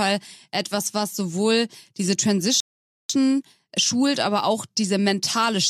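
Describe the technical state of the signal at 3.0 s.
At 3.0 s the speech is halted by a rebuffering stall running from 2.60 to 3.10 s, just after "etwas was sowohl diese": playback ran out of downloaded audio and went silent for about 0.49 s. Unlike a dropout, nothing is lost; the speech resumes exactly where it stopped, only delayed.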